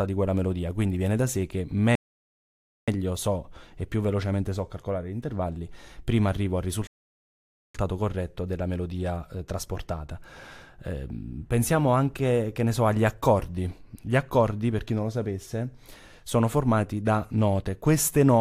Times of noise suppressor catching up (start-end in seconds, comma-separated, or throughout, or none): none